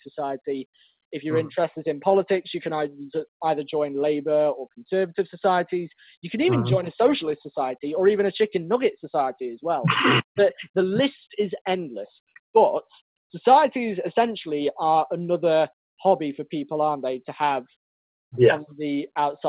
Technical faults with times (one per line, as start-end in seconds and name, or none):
none